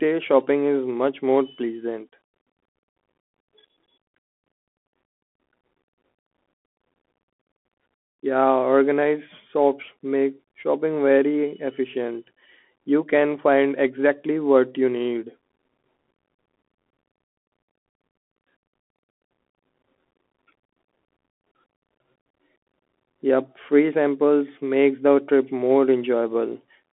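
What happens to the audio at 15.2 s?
At 15.2 s, as throughout the clip, the speech is carried by the Bluetooth CVSD headset codec, whose one-bit up-or-down steps form a 64 kbps stream. Nothing passes above 3.8 kHz, so it sounds thin and band-limited, with scratchy s sounds, distorted loud peaks and granular hiss.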